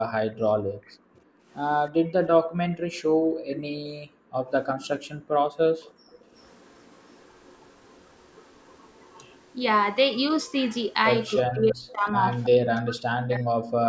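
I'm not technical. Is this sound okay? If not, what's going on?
No. At 0.01 to 1.17 s, 2.91 to 3.64 s and 11.43 to 13.55 s, the speech sinks or breaks into pieces, likely speech suppressed in double talk: both sides spoke at once, and the call's echo canceller turned everything down.

From 0.85 to 3.61 s, 5.83 to 9.39 s and 11.88 to 12.45 s, a faint delayed copy of the voice trails about 0.32 s behind, likely an echo leak from a loudspeaker. It is quietest in the middle stretch and easiest to hear near the start. Unlike room reverberation, it is a separate, repeated copy.

Between 1.45 and 6.31 s, the room sound itself briefly drops to near silence and then returns. This is background gated by the echo canceller, which muted the microphone while the loudspeaker played.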